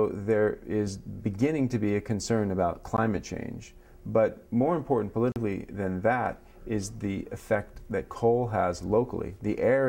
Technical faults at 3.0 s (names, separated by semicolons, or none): block of digital silence